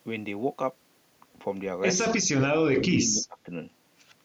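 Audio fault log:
2.24–3.5 s, speech suppressed in double talk: the speech level drops by roughly 25 dB in stretches totalling about a second. The likely cause is an echo canceller mistaking near-end speech for echo and attenuating it. The waveform envelope shrinks sharply, and the spectrogram dims there.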